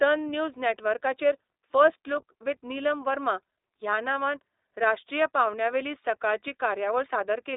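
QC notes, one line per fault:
throughout, iLBC codec: the speech is confined to a telephone band of 300 Hz to 3.7 kHz, losing all brightness above it, and a plainly audible rough, synthetic edge comes from coding each 20 ms frame's excitation independently, which fits the 15.2 kbps mode.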